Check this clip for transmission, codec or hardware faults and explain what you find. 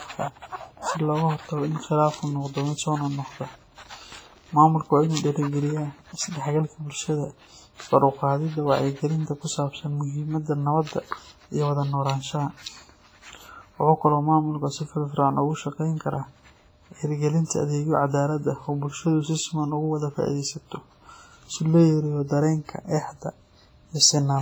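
Two codec faults are present in this speech recording, one running through the whole clip and one brief event.

WMA compression: From start to end the speech rings and sounds washy, with hiss that swells and fades with the signal and weak detail missing. Heavy quantisation in a transform codec is the likely cause, with the damage pointing to a low bitrate near 24 kbps. This differs from broadband background noise because the hiss tracks the speech instead of sitting at a steady level.

Pre-echo: From 17.45 to 17.50 s, a short hiss of about 56 ms comes just before a sharp onset, which then sounds softened. The codec spreads noise across the whole block, so noise sized for the loud attack also fills the quiet gap before it. Unlike reverb or an echo, this smear comes before the attack rather than trailing after it.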